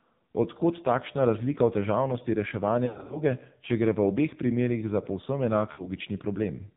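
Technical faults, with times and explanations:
Throughout: AMR narrowband mobile codec at a heavy 5.9 kbps, nothing above 4 kHz survives, and the speech sounds buzzy and synthetic from the sparse pulse excitation.
2.86–3.20 s: lost AMR speech frames after "takšna razlika v težavnosti", about 180 ms scattered over 240 ms, runs up to 60 ms, giving dips and warble before "če gre v obeh".
5.72–5.90 s: lost AMR speech frames, about 60 ms missing, where the decoder repeats the last pitch and vocal-tract settings at falling gain, causing a brief smeared dip.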